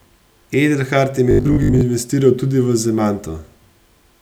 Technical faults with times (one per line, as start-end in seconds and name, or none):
1.31-1.81 robotic sound from repeated short buffers